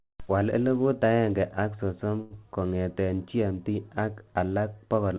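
A short stall from a late packet at 2.21 to 2.33 s in this speech clip holds the sound for about 92 ms with a faint buzz or dip while the emptied jitter buffer waits, then resumes where it left off, losing nothing. The call path's cut-off at 4 kHz fits G.711-style telephone coding.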